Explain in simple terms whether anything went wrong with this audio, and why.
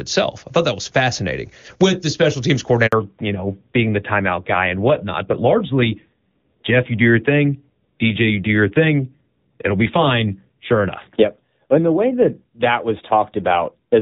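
Right after "with the special teams", the voice cuts out for 60 milliseconds, from 2.87 to 2.93 s. That's a handover gap: the phone switched networks and nothing arrived while it changed over. From 2.93 s to the end, the voice sounds duller and thinner, with nothing above 4 kHz. That's a fallback to narrowband, where the call dropped from the clearer HD Voice codec, which sounds clean before the switch, to an older, lower-quality phone codec.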